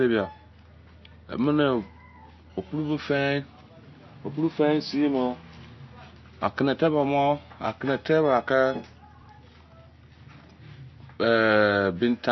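From start to finish the speech has a dull, band-limited sound with nothing above 5.9 kHz, and the upper part that remains sounds watery and swirly, with s sounds breaking into metallic chirps and consonant onsets smeared. This is most likely MP3 compression at a low bitrate, something near 32 kbps. Short of bits, the encoder discarded the treble at a fixed frequency and let weak frequency lines switch on and off between frames. The shifting, bubbling texture is what marks it as codec damage rather than a simple low-pass filter, which would sound dull but steady.

Between 9.22 and 9.28 s the speech briefly garbles: about 60 ms plays in the wrong order. This is chunks out of order. The pattern suggests a 20 ms block arrived or was written late and played after the two blocks that should have followed it. Nothing is actually missing, and that distinguishes it from a dropout or packet loss, where a gap or concealment fill would replace the lost audio. 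Here the same sound is present but rearranged.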